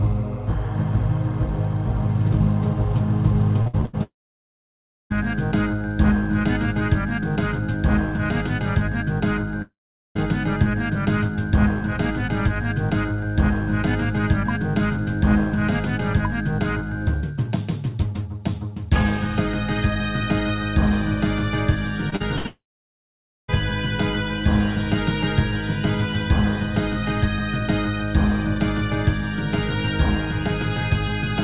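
Repeated packet loss (robotic sound) runs from 3.62 to 3.95 s. Four gaps follow in quick succession, the longest 77 ms. Each is patched by continuing the last sound, and more than half the stretch is concealment, so the sound turns choppy, with pieces missing.

A long network dropout follows from 4.03 to 5.12 s, and two more occur at 9.62 to 10.17 s and 22.46 to 23.50 s. The likely cause is that no audio arrived for over a second, half a second, and a second respectively. A brief fading continuation gives way to silence for about 0.99 s, 0.44 s and 0.89 s, and the sound then resumes further on without the lost part.

Short concealed packet loss occurs twice, from 22.10 to 22.23 s and from 22.16 to 22.22 s. About 20 ms and 40 ms never reached the decoder in time. The receiver extended the preceding sound and blended back in, which is heard as a quick smear or wobble.

A burst of packet loss from 22.36 to 22.46 s drops about 80 ms in a row. 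The last sound is held and fades, either as a buzz or as hiss, and this leads straight into the final dropout.

Throughout, nothing is heard above 4 kHz, which fits a 64 kbps G.711 mu-law call path.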